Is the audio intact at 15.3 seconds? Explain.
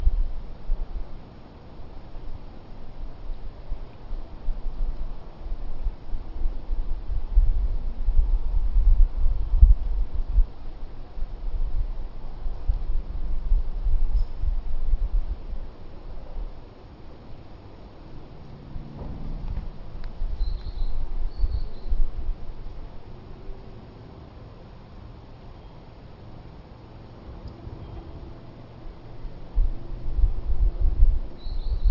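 No, aliasing runs through the whole clip, 15.3 s included. Downsampling to 12 kHz without filtering folds content above 6 kHz back down as faint, metallic grit, roughly 40 dB below the signal. A spectrogram shows energy running hard up to a 6 kHz edge, with mirrored traces.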